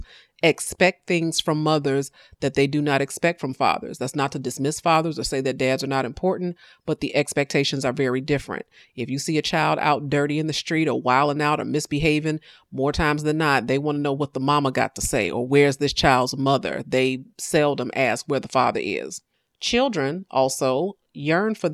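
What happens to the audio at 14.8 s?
At 14.8 s there are clock slip clicks, running from 0.11 to 21.70 s. They likely come from two unsynchronised clocks drifting about 500 ppm apart, dropping or repeating one sample roughly every 40 ms. The result is a faint, fast, regular ticking, almost a soft rattle. A spectrogram shows evenly spaced thin vertical broadband lines, and the waveform shows tiny single-sample steps.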